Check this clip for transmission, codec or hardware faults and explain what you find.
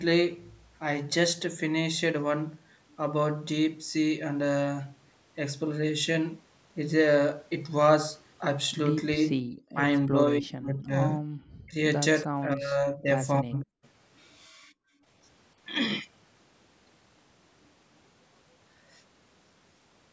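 Two echo-canceller problems show up, both in the middle of the clip, with the band topping out around 8 kHz from the call's microphone processing.

Speech suppressed in double talk hits at 9.7, 10.08, 10.4 to 10.94, 11.19, 11.66, 12.23 to 13.08 and 13.41 to 13.79 s. The speech dips by roughly 10 to 40 dB in choppy bites, likely because the canceller couldn't tell the talker from loudspeaker echo.

Background gated by the echo canceller runs from 14.49 to 15.06 s. The room sound drops by about 38 dB while the loudspeaker plays, then comes back once the canceller releases.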